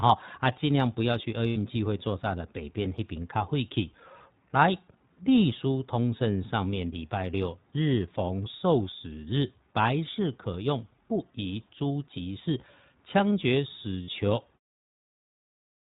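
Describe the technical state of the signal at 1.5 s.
At 1.5 s, lost iLBC frames leave a gap from 1.48 to 1.58 s, about 80 ms, which fits four 20 ms frames. The decoder repeats the last pitch cycle mixed with noise, so the gap sounds like a held, buzzy vowel rather than silence, and the voice recovers almost at once. Throughout, the iLBC codec cuts everything above 4 kHz and gives the speech a rough, synthetic edge, pointing to its 15.2 kbps, 20 ms mode, unlike codecs that lean on earlier frames, where a loss lingers into the speech that follows.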